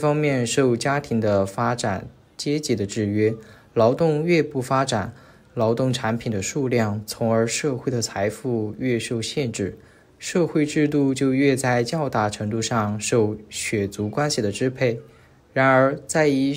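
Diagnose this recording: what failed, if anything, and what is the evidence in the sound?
Nothing in the recording stood out on listening as a fault at any stage.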